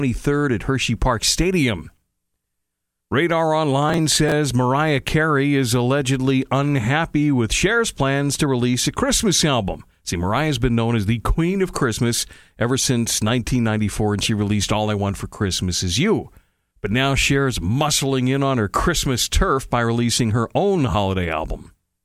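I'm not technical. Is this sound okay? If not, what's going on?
No. From about 3.89 to 4.32 s there's a burst of processor overload crackle, a gritty tearing over the speech. The computer fell behind, so about ten very short chunks of audio, each around a millisecond and a half, got skipped, leaving tiny hard-edged gaps.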